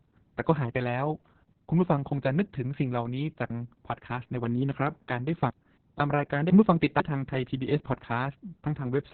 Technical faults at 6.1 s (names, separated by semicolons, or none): Opus voice compression; chunks out of order